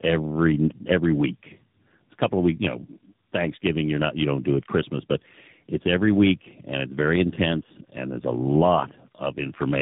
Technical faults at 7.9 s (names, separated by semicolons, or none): tandem speech coding